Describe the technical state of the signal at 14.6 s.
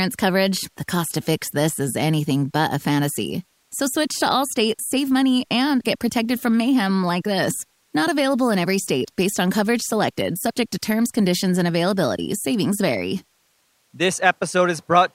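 At 14.6 s the speech signal is intact, with no audible technical fault at that moment.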